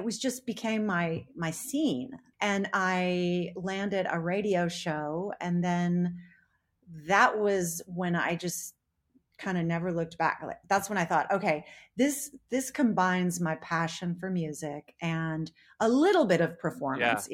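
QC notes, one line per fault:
Nothing stood out on listening to this speech recording.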